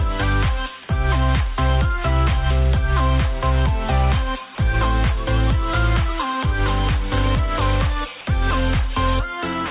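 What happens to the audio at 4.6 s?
The sender's voice detector likely judged a stretch of the signal to be background and stopped transmitting, so the receiver filled the gap with comfort noise. This is sound dropped by the voice detector, from 4.55 to 4.58 s. For those 30 ms the audio gives way to a brief patch of steady, featureless noise, then returns when transmission resumes, still band-limited to 4 kHz by the G.711 call path.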